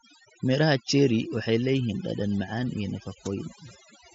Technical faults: overdone noise removal

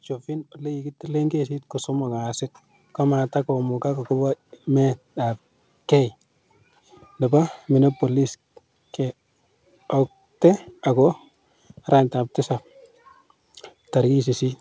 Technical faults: microphone volume stepped up

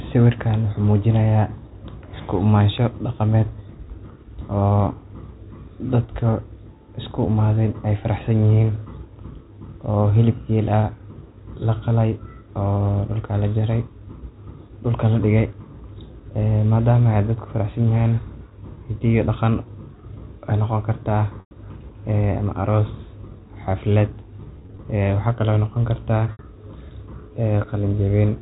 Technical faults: mains hum; packet loss with pitch repetition

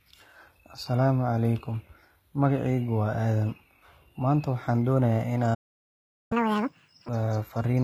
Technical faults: low-bitrate audio saved at a high bitrate; playback stall; catch-up at higher speed

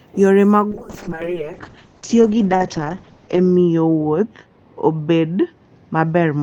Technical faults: call bitrate drop

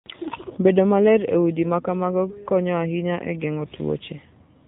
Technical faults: AMR narrowband mobile codec

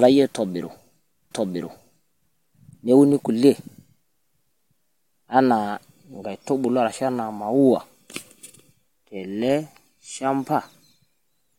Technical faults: stream segment repeated

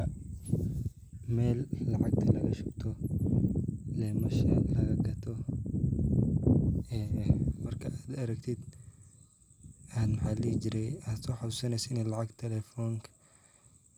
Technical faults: none

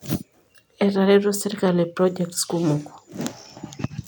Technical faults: none

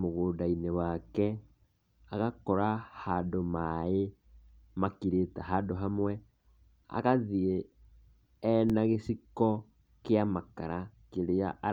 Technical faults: underrun with held sample

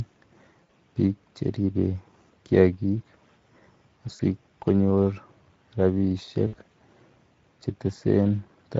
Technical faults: Speex codec; VoIP packet loss concealed by the speech codec

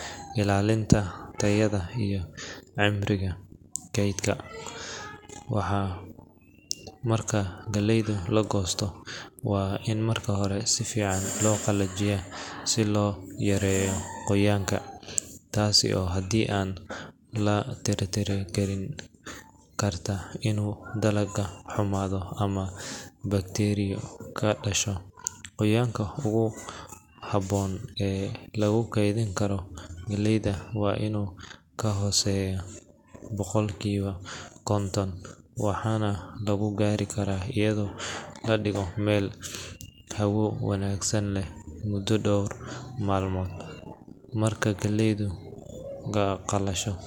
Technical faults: none

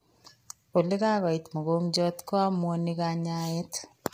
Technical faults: low-delay AAC compression

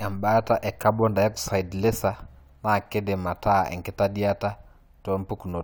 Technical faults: none

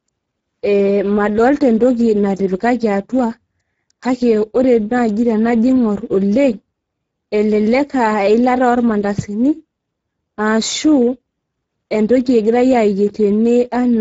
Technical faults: Speex codec

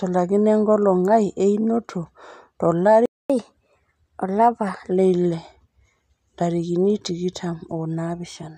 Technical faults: playback stall; catch-up at higher speed

